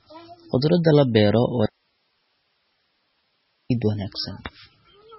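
Throughout the speech, the encoder was starved of bits, most likely by heavy MP3 compression at a very low rate, one that points to something near 16 kbps. To cope, it discarded everything above 5.6 kHz and zeroed weaker frequency lines frame by frame. The result is dull, band-limited speech with a watery, swirling texture, metallic chirping on sibilants, and smeared consonant onsets.

From 1.66 s to 3.70 s, the wanted signal stops reaching the output for about 2.05 s, likely an audio dropout to a faint residue, while the path after the break stays live. The speech cuts off abruptly rather than fading, leaving only hiss about 45 dB below the speech level. At 3.70 s the speech snaps back just as suddenly, mid-flow.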